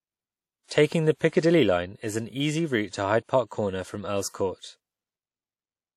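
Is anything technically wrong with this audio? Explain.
Yes. WMA compression, throughout: the speech carries a ringing, washy smear and a hiss that swells and fades with the signal, likely from a transform codec at a bitrate around 48 kbps, spreading quantisation noise over long blocks and cutting everything above 16.2 kHz.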